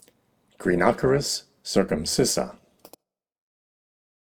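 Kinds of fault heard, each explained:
Overlap-add ripple: the audio was rebuilt from windowed frames whose overlap does not sum to a constant gain, so the level swings by about 6 dB once per frame, around 200 times a second, throughout. It is a metallic buzz with extra tones around each note, not a separate added hum.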